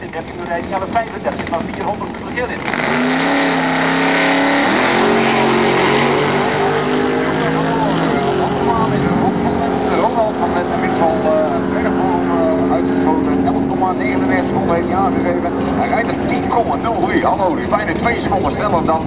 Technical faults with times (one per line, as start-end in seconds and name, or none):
none